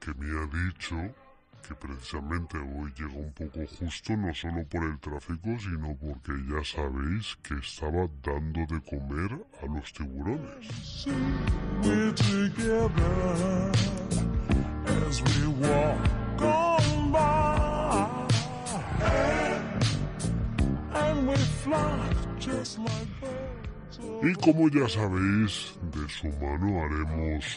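From start to finish the audio plays slow and low: everything runs at about two-thirds of its proper speed, and the pitch sits about 7 semitones down, roughly a fifth lower, with tempo and pitch dropping together. That pairing is the signature of a wrong sample rate, where samples are clocked out slower than they were captured, with no conversion in between. A 0.667 ratio fits material recorded at 48 kHz being played back at 32 kHz.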